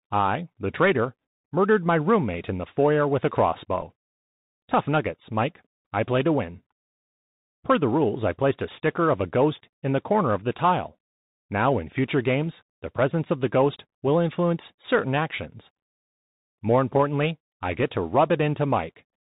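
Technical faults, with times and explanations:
throughout, Bluetooth CVSD headset codec. The speech is narrowband, with nothing above 4 kHz. The damage is plainly audible. This codec sends one bit per sample, saying only up or down, and its step size adapts to the signal. The result fits a 64 kbps CVSD link. Loud, high sounds change faster than the step can follow, so they distort. S sounds turn scratchy. A granular hiss sits under the speech.
3.81 s, Bluetooth headset packet repeated. Just after "the foyer with a", a brief buzz lasts about 7.5 ms. Audio between headset and phone was lost there, which fits two dropped packets. The chip filled the gap by decoding the previous packet's bits again. Each repeat spans 3.75 ms. Two repeats in a row give a short burst of buzz near 267 Hz before normal packets resume.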